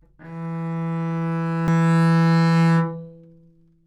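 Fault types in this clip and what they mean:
CD skip: a mechanical knock or a surface flaw throws the laser pickup onto a neighbouring turn of the disc's spiral, so the player briefly mutes and resumes reading from a different point in the track. Here it lands at 1.67 s as a short tick with a mute of only a few milliseconds, after which the sound continues from a displaced position rather than picking up where it left off, giving an abrupt discontinuity in the material.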